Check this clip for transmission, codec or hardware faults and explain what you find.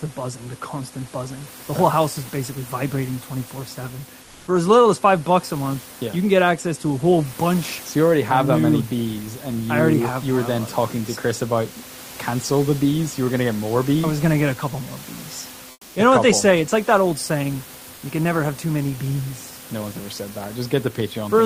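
Twice the background drops out and is replaced by comfort noise: from 4.23 to 4.47 s and from 15.71 to 15.95 s, each about 240 ms. In these pauses the sender's voice detector likely halted transmission, as in Opus DTX, and the receiver filled the gap with synthetic noise matched only roughly to the room. The room noise, about 24 dB below the speech, briefly turns smooth and featureless, about 1 dB louder in the first gap and about 2 dB quieter in the second.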